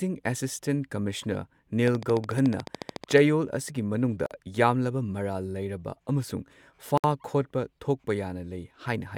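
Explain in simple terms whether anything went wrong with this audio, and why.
From 1.88 to 3.19 s, a steady ticking runs over the speech: about 14 sharp clicks every second, evenly spaced, roughly twenty in all, and they stick out above the voice. This is a train of clicks, short identical pulses added on top of the recording. The regular pace most likely comes from electrical interference from nearby equipment or from a faulty connection or power supply.

The speech also drops out briefly twice: a 46 ms hole at 4.26 s and a 64 ms hole at 6.98 s. Each time the sound fades into silence and then carries on where it stopped. This is a gap at a join of encoded pieces. The audio was compressed in separate chunks and stuck back together without trimming, so the short stretch of silence each chunk carries at its edge stayed in.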